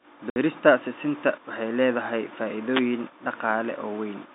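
A speech recording carried over a telephone line, its band held to roughly 200 Hz to 3.7 kHz by G.711 coding. At 0.30 s a packet loss filled with silence cuts a 60 ms hole, which fits three lost 20 ms packets. The receiver substituted silence, so the waveform drops abruptly to near silence and the spectrogram shows a blank vertical gap with hard edges. From 2.72 to 2.82 s a wireless microphone noise hit adds a brief swish of static, as the FM radio link faded and receiver noise surged over the signal. On a spectrogram it appears as a broadband smear across the telephone band for about 100 ms, and the waveform shows a rough, noisy burst.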